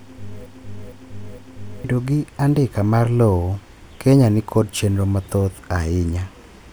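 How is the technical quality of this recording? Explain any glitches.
Quality suffers from one glitch at the start. From 0 to 1.84 s, a broken-record loop repeats one 0.46 s piece of speech three times. A stall likely resent the last held fragment, so the speech meant for that span is lost.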